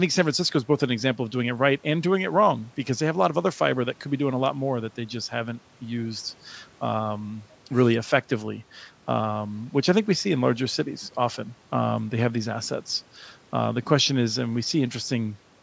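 Nothing goes wrong anywhere in this speech; it's just been through ordinary call microphone processing, which trims the deepest bass and leaves nothing above 8 kHz, and that's exactly what such processing is supposed to do.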